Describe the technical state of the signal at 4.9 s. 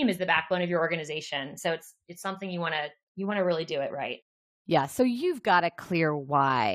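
At 4.9 s the signal is intact, with no audible fault at that moment.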